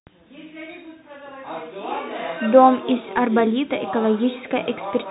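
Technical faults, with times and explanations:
Throughout, Bluetooth CVSD headset codec: the speech has been squeezed through the narrowband headset link, so nothing survives above 4 kHz. It's one bit per sample at 64 kHz, and the adaptive step can't keep up with loud high sounds. You get scratchy s sounds and a grainy hiss under everything.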